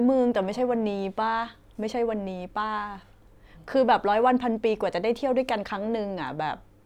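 No dropouts, clicks, distortion or other technical faults turn up anywhere in the recording.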